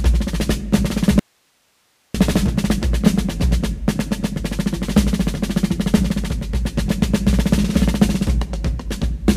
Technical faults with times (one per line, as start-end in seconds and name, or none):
1.19-2.14 audio dropout to a faint residue